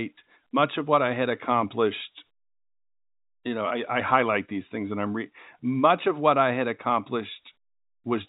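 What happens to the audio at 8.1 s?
Nothing goes wrong at 8.1 s: the speech is intact there, carried in the usual narrow telephone band with nothing above about 3.8 kHz.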